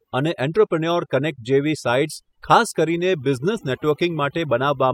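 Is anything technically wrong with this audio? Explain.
Yes, there's overdone noise removal running through the whole speech clip. The denoiser was pushed too hard, so it pulls individual frequency bands right down whenever they sit near its noise estimate, taking softer bits of the voice too. You get near-silent gaps with twinkly specks.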